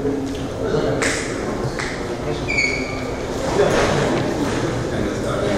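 Nothing technically wrong can be heard in the clip.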